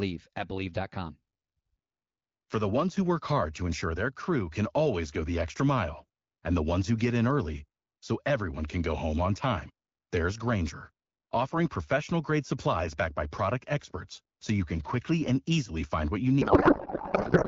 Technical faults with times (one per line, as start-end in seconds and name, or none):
16.41-17.47 codec payload misread